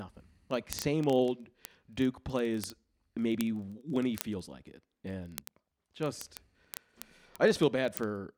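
The receiving device runs on its own clock, unlocked from the sender's, with a mismatch of around 700 ppm, producing word clock ticks from 0.11 s to 8.37 s. Each clock slip drops or repeats one sample, giving sharp ticks roughly every 30 ms, some 300 in all, throughout the speech.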